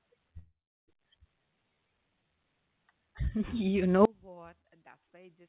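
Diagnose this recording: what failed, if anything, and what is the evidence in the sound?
Call audio freeze, network and jitter buffer stage. From 0.38 to 0.90 s the speech stalls into a fading buzz, silent for its last 0.34 s. It then resumes intact. Delayed packets likely caused it.

Skip ahead, jitter buffer stage. At 1.24 to 1.26 s playback jumps forward. Roughly a fifth of a second of speech is gone, spliced almost seamlessly.

Jitter buffer slow-down. Between 1.39 and 2.37 s the speech drags at 84% speed, same pitch. Repeated pitch periods add 161 ms to rebuild the buffer.

Audio dropout to a faint residue, upstream signal path. At 4.05 s the speech cuts abruptly. A faint trace about 30 dB down persists to the end, likely from a lost source with a live path.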